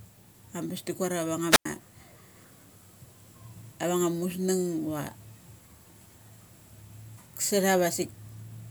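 The analogue FM radio link in this speech recording fades, triggering a wireless microphone squelch dropout at 1.49 to 1.65 s: hiss rises, then about 95 ms of near silence follows.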